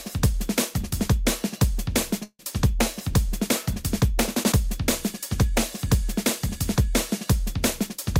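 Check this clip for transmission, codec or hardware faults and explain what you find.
One transmission fault is present: a call audio freeze from 2.23 to 2.42 s. The last sound is drawn out and fades, ending in about 50 ms of silence, then resumes where it stopped. The likely cause is delayed packets draining the jitter buffer; 158 ms was inserted, nothing lost.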